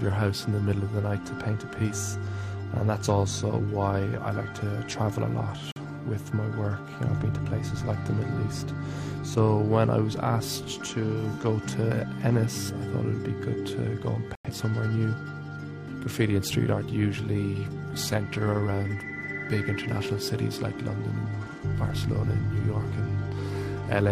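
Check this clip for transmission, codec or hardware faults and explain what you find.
Two dropouts show a corrupt frame muted fault. At 5.72 s the sound stops abruptly for 0.10 s, consistent with one lost frame. At 14.35 s a 0.15 s silent gap suggests several consecutive frames. Bit errors made the decoder reject these frames, and the player substituted silence. Timing stays intact around both holes.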